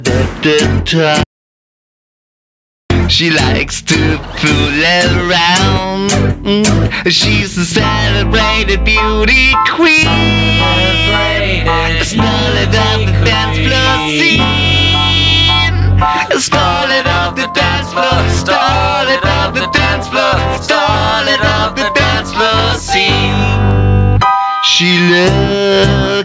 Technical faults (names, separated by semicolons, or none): gain pumping; audio dropout to silence